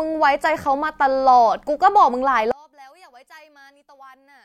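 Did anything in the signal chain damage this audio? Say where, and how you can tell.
Yes. One channel inverted, from 2.51 s to 4.45 s: the speech suddenly drops by about 30 dB into a faint residue. The likely cause is a polarity-reversed channel in the analogue wiring, so the centred speech common to both channels cancels when summed to mono.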